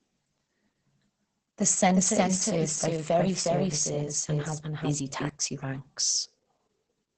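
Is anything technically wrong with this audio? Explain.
Yes, there are two faults.

Opus voice compression runs through the whole speech clip. The codec is working in its SILK linear-prediction mode, rebuilding the voice from a predicted spectral shape and a coarsely coded excitation signal. Nothing is left above about 8.6 kHz, which fits wideband operation, and the heavy damage points to a bitrate near 10 kbps. The voice sounds muffled and hoarse, with a slightly robotic, buzzy edge where the excitation detail has been thrown away.

A doubled audio track appears from 1.93 s to 5.29 s. A second copy of the sound trails the original by roughly 0.4 s at about the same level. It is most likely caused by the audio being captured twice, once through a slower path, or by an edit that left two out-of-step copies. The copy is full-band, with no decay or room colouring, so it sounds like a hard, distinct repeat. 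It switches on and off abruptly at both ends of that span.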